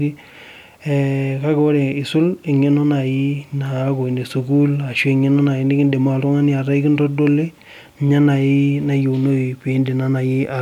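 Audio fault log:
No faults were found in the speech. Nothing here calls for an entry in the log.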